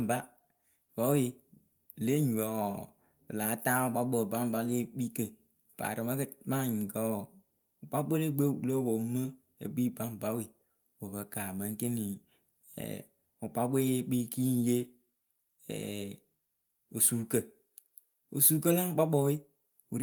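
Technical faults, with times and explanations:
No technical faults can be heard anywhere in the speech recording; the signal stays continuous and stable, with no breaks, distortion, or level disturbances at any point.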